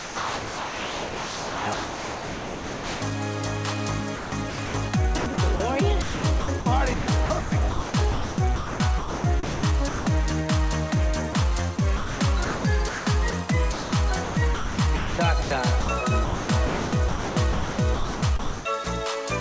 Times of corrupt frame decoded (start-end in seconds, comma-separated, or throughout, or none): none